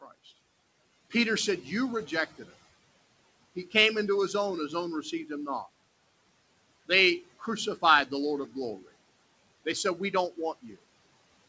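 Throughout the speech the background sinks between phrases and swells back under them. These are noise suppressor artifacts: the suppressor pulls down what it judges to be steady noise by about 20 dB, frame by frame, on top of room noise about 20 dB below the speech, and nothing reaches above 8 kHz, in keeping with the G.722 call path. From 5.02 to 5.3 s, between "his own his own" and "him not", parts of the speech sound swallowed, dipping by about 9 dB over roughly a tenth of a second. Again from 10.62 to 10.79 s the sound goes faint, about 16 dB down over roughly 150 ms. Both are speech cut by the noise suppressor, which mistook quiet speech for background.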